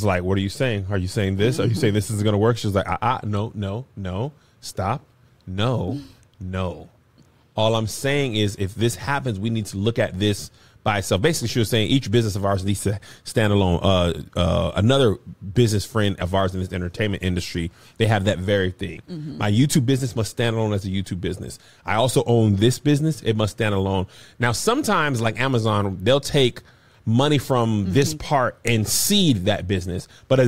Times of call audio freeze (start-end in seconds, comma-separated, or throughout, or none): none